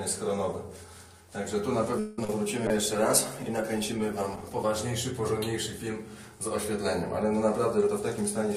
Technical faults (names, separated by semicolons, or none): repeated stalls (stutter); call bitrate drop; jitter buffer speed-up